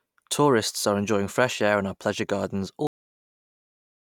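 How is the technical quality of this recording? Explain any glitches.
The recording has a cut-off end. At 2.87 s, right after "in our pleasure gardens", the final buffers were never written, so the speech stops mid-sound and falls straight to digital silence for the remaining 1.3 s, with no natural decay.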